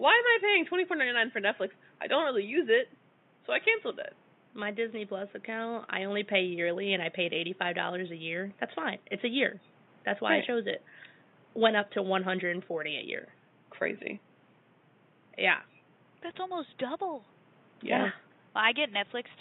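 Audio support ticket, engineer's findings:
No faults found in the speech path. Room noise sits about 33 dB below the speech, and it comes from the recording environment, not the system.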